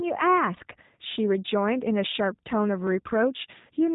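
Throughout the speech, the sound is dull and boxed-in, with nothing above about 3.8 kHz, and carries a rough, slightly synthetic buzz that is plainly audible. This is G.729 codec damage, here the G.729A variant at a rate that fits 8 kbit/s. Instead of storing the waveform, it rebuilds each 10 ms frame from a vocal tract filter, a pitch predictor and a handful of pulses, so fine detail is lost and the texture turns artificial.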